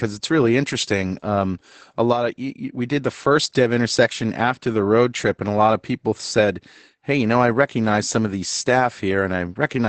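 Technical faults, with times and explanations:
Throughout: Opus voice compression, SILK wideband mode, nothing above about 8.8 kHz, leaving speech muffled and hoarse; band-limited coarse excitation, not simple filtering, adds the robotic edge.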